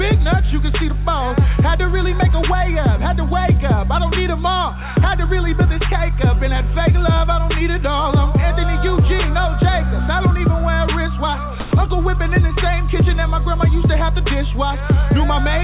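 At 11.6 s the sound drops out for about 120 ms and a flat hiss sits in its place until 11.72 s. That's likely sound dropped by the voice detector: the sender judged it background and stopped sending, so the receiver filled the gap with comfort noise.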